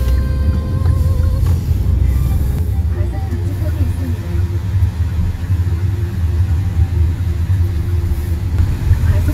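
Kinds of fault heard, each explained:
Channel delay (comb filtering): from 2.59 to 8.59 s the sound turns hollow and phasey, with fixed notches starting near 40 Hz and repeating evenly upward. One channel arrives around 10 ms late, and summing both to mono cancels their shared content at those frequencies.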